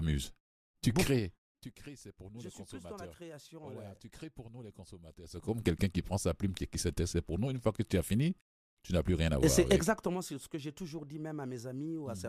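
From 5.21 to 5.63 s, between "crées pour nous les" and "quelqu'un qui prend sa", zipper noise: the level rises roughly 20 dB in unsmoothed 3 dB jumps, around fifteen per second, each leaving a click. From 9.73 to 10.33 s, before "que j'ai toujours dit", a drop of about 10 dB ticks at roughly seven steps per second.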